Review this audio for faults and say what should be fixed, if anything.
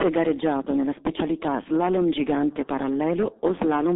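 Throughout the speech, heavy G.723.1 codec damage cuts everything above 3.8 kHz. Its coarse 30 ms frames and slow voice model add hoarseness and smeared consonants, which fits a rate near 6.3 kbit/s. Simple low-pass filtering would muffle without that roughness. Prevent it by using a wideband codec at a higher bitrate.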